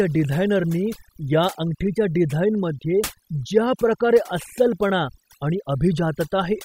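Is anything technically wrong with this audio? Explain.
Yes. Overdone noise removal runs throughout this speech clip. A noise reduction stage set far too aggressively cuts any frequency band near its noise estimate, taking quieter parts of the voice with it. The background drops and breaks up into twinkling specks.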